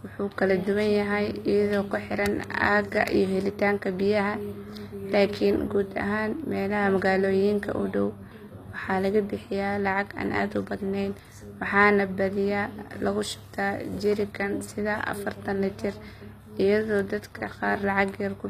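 Gritty, metallic treble runs through the whole speech recording, with s sounds smeared and lispy and nothing above 14.9 kHz. That is the sound of HE-AAC compression, and the plainly audible damage fits a low bitrate around 24 kbps: the top of the spectrum is likely rebuilt from copied lower bands instead of coded, so its harmonics don't match. Three sharp, broadband ticks unrelated to the sound land at 2.44 s, 11.19 s and 16.99 s. These are bit error spikes, where a flipped bit makes one or a few samples jump by a power of two and snap straight back.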